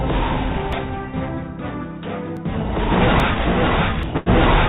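At 0.73, 2.37 and 3.2 seconds, the sound jumps abruptly. These are likely dropped buffers from an overrun. Roughly 20 ms goes missing each time, and the two sides butt together with no gap.

At 4.03 seconds, a similar, likely dropped buffer (overrun) produces a larger skip, with about 40 ms lost.

From 4.17 to 4.29 seconds comes a short stall from a late packet. The last sound is stretched for 88 ms while the receiver waits, then carries on where it left off. Nothing is missing, but the held sound drones briefly.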